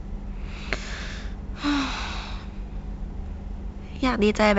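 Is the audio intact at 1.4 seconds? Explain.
Yes, the speech at 1.4 seconds is intact, carried cleanly by G.722 wideband telephone coding at 64 kbit/s.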